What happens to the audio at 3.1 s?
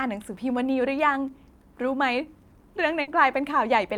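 A burst of packet loss hits from 3.01 to 3.10 s. The last sound is held and fades for about 60 ms before speech resumes with roughly 60 ms missing, visible as a smeared, fading band ending in an abrupt restart.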